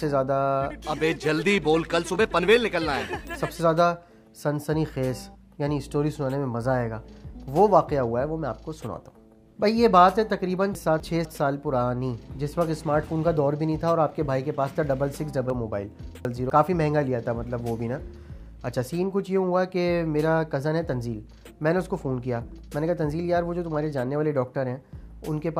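At 10.75 to 11.25 s and again at 15.5 to 16.5 s the audio has chunks out of order: 250 ms blocks play one and then three positions late. Nothing is missing, but at the hard joins the sequence sounds briefly jumbled.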